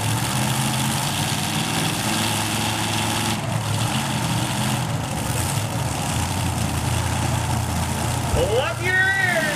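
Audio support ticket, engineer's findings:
No faults found on listening to the everyday-sound recording; no action required on the audio path.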